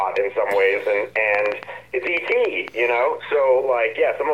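From 1.16 to 2.69 s a train of clicks runs over the sound, around ten similar pulses at about 7.2 per second, unevenly spaced and peaking roughly 10 dB above the signal. It reads as irregular ticking, likely from interference or a faulty connection.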